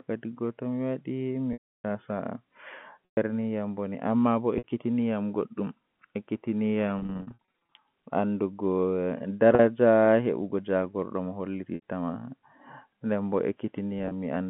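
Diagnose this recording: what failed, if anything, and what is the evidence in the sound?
The network dropped packets, and the receiver concealed the gaps with packet loss with pitch repetition: 1.53–1.84 s (310 ms), 3.05–3.17, 4.58–4.64, 6.99–7.77 (scattered short runs), 9.55–9.59, 11.75–11.82 and 13.99–14.11 s. Brief gaps sound held and buzzy, and the 310 ms gap fades to silence.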